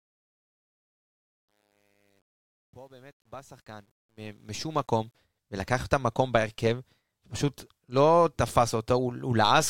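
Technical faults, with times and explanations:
0.00–5.15 s: truncation distortion on a fade. The speech fades in through a gain stage that rounds to coarse steps without dither, which fits roughly 10-bit resolution. It is gritty, worst until 3.84 s, and the distortion ends at 5.15 s.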